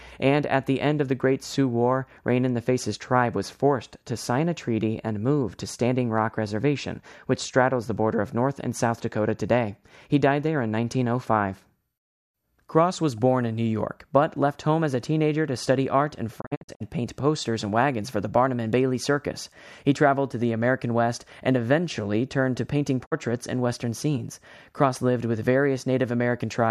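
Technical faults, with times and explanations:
16.40 to 16.82 s and 23.05 to 23.13 s, digital broadcast dropout: quick 20 ms fades to silence, scattered holes then one 48 ms gap, as the receiver muted failed frames.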